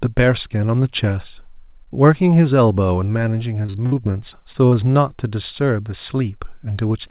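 From 3.62 to 4.75 s the speech shows repeated packet loss (robotic sound): eleven short gaps, the longest about 58 ms, each patched by extending the previous sound. About a quarter of that stretch is concealed, so it turns choppy, over narrowband audio with nothing above 4 kHz.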